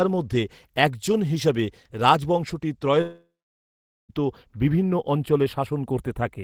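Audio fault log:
3.01–4.12 s, long network dropout: the stream likely stopped delivering audio for about 1.1 s, so the receiver extended the last sound as a fading buzz, then left about 0.8 s of silence, and speech resumes with that stretch missing.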